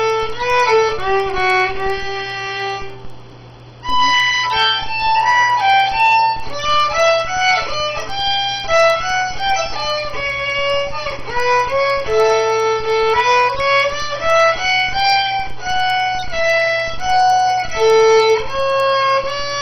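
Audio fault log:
throughout, resampler restarted on every block: faint ticks fall exactly every 100 ms, a steady 10 Hz pattern that comes and goes with the signal and disappears in silence. Each block was upsampled separately, with the converter's filter starting cold at every edge, so each boundary carries a small error. The upsampling points to 16 kHz audio converted to 48 kHz. Unlike dropouts or packet-loss clicks, the ticks never drift or skip, and no audio goes missing.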